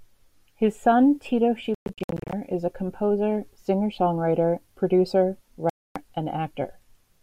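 From 1.75 to 2.33 s the speech breaks up in a Bluetooth dropout, just before "is a composer". About 363 ms of it vanishes in scattered holes over 0.58 s, the longest gap 116 ms. Each hole cuts in abruptly or with a brief fade. Speech then resumes further along, as if it had kept playing. A second dropout silences 5.70 to 5.96 s, about 261 ms. The likely cause is audio packets reaching the headphones too late and being discarded.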